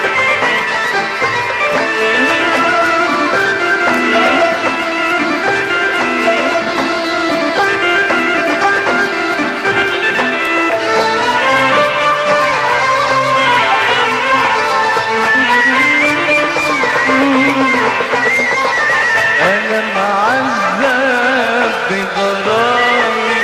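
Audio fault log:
No fault to log.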